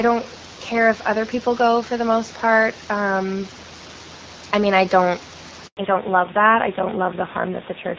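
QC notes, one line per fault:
5.67–5.77 s, handover gap: the sound fades out within a few tens of milliseconds and stays silent for 100 ms while the call switches networks. No speech frames arrive during the switch, so that stretch of audio is lost rather than delayed.
5.77 s to end, fallback to narrowband: right after the gap, all content above 4 kHz disappears and the speech turns duller and rougher. This points to a drop from HD Voice to a narrowband codec, and the band limit and added roughness fit AMR-NB at about 7.4 kbit/s.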